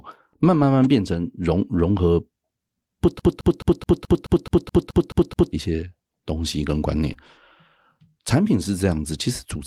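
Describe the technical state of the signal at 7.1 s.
At 7.13 to 7.17 s there is a short concealed packet loss: about 20 ms of the speech never arrived in time, and the receiver filled roughly 15 ms by extending the preceding sound before crossfading back, heard as a brief smear or wobble.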